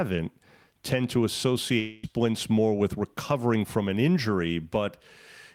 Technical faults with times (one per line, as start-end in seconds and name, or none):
1.79-2.06 long network dropout